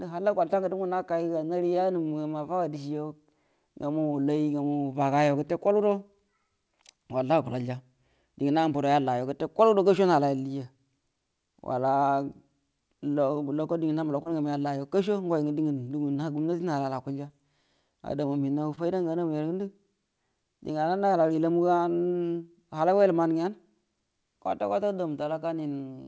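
Short concealed packet loss at 0.48, 14.23, 16.13, 17.27 and 18.75 s: about 20 ms of speech failed to arrive each time, and the receiver filled the gap by extending the preceding sound, leaving a brief smear or wobble. The call audio carries nothing above 8 kHz, which fits a G.722 call codec.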